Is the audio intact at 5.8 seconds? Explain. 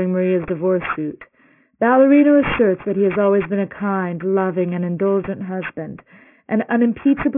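No, 5.8 s sits inside aliasing that runs the whole clip. The highs fold back below a 3 kHz edge, fitting a drop to 6 kHz sampling, leaving gritty, metallic sibilants, with the aliases roughly 15 dB below the signal.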